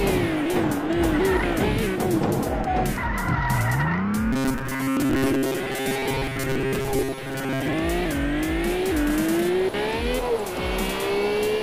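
From 4.33 to 7.74 s, robotic sound from repeated short buffers gives a rigid 134 Hz buzz, likely from re-looping a 7.5 ms buffer over most of the audio, not silent dropouts.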